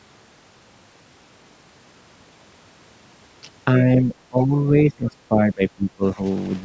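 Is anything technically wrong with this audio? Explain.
Yes. Speech suppressed in double talk, from 3.8 to 6.23 s: the speech dips by up to about 20 dB for roughly 1.5 s in pieces, likely because an echo canceller mistook it for loudspeaker echo.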